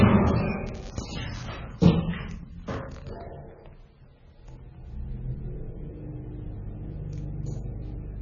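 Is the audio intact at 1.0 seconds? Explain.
No. At 1.0 s the sound is inside a stretch of buffer tearing running from 0.66 s to 1.47 s. The writing and reading positions in the playback ring buffer have slipped and cross every 5 ms, so a small sliver of each period, a few percent, is audio from roughly 10 ms earlier, spliced in with hard joins. This produces a rattling, robotic buzz at 200 Hz that is present only while sound is playing. On a waveform, regular discontinuities appear every 5 ms; a spectrogram shows a 200 Hz comb of harmonics and faint vertical clicks.

The same moment also carries heavy MP3-style compression, heard across the whole clip and likely caused by a very low bitrate, around 17 kbps. Nothing is present above 6.9 kHz, so the top end sounds dull and cut off. Weak frequency lines drop in and out from frame to frame, giving a watery, swirling texture with smeared attacks. 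A spectrogram shows a flat ceiling at 6.9 kHz and patchy, flickering blocks of energy below it.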